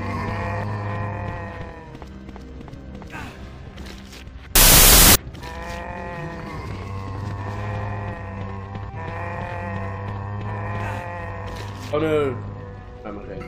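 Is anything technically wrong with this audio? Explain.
Yes. From 4.55 to 5.15 s there is a wrong sample width fault. The sound bursts into loud, harsh noise with the original audio faintly buried in it, running at half speed and an octave low. This fits 32-bit float data read as 16-bit integers. Each 4-byte sample is split into two values, which doubles the sample count. The half carrying the sign, exponent and top mantissa bits loosely tracks the waveform, and the low mantissa half comes out as noise.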